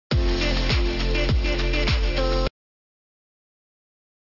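From start to finish the sound carries aliasing. The content runs right up to about 6 kHz and stops hard, which fits a downsample to a 12 kHz rate without an anti-aliasing filter. Energy that lay above 6 kHz has folded back below it as unrelated pitches, fairly loud against the wanted sound, so sibilant and bright detail comes out gritty and metallic. A properly filtered low-pass would sound dull and clean instead. Here the top is harsh and wrong.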